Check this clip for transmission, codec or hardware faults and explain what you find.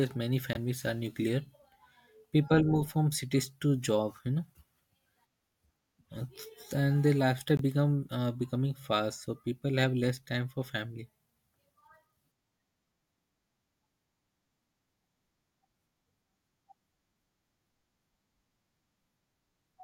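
Two short gaps in the speech, likely Bluetooth dropouts. At 0.53 to 0.57 s, just before "are nuclear", and at 7.57 to 7.61 s, between "and the lifestyle" and "uh becoming fast so", about 21 ms of audio vanishes, which fits one lost frame. The speech resumes further on, as if it had kept playing. Each gap shows as a thin vertical silent band on a spectrogram and a flat break in the waveform.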